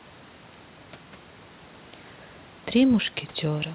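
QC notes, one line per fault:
No faults to note.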